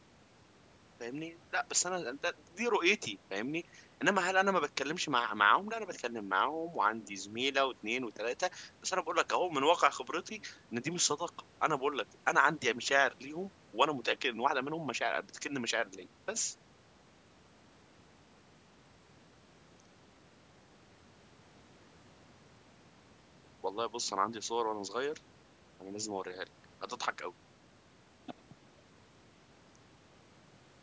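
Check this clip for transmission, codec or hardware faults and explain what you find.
No transmission, codec or hardware fault is audible; the speech carries only the normal marks of call microphone processing, with the lowest bass filtered off and nothing above 8 kHz.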